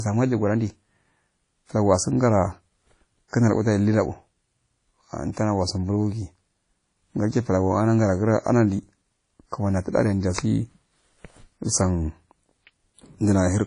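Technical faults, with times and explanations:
Throughout, WMA compression: The speech sounds smeared and washy, with ringing around sharp sounds and a hiss that swells and fades with the voice. Nothing is heard above 10.1 kHz, so the top of the sibilants is gone. The cause is likely a low-bitrate transform codec, which fits a bitrate around 32 kbps. It codes the sound in long blocks. Its quantisation noise spreads in time around each sound, and weak detail is dropped.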